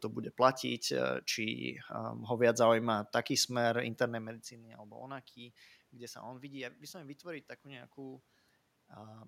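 No technical faults can be heard in this recording.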